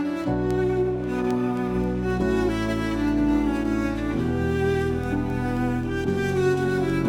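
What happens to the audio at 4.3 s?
At 4.3 s the audio is inside a run of word clock ticks lasting from 0.24 to 6.90 s. A receiver on its own unlocked clock drops or repeats a single sample each time the clocks slip, heard as sharp ticks of uneven strength. Unlike random clicks, they recur steadily about every 0.3 s.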